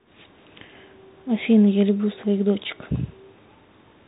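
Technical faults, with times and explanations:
Throughout, Bluetooth CVSD headset codec: nothing above 3.8 kHz, with granular hiss and scratchy s sounds from one-bit delta steps, fitting a 64 kbps stream.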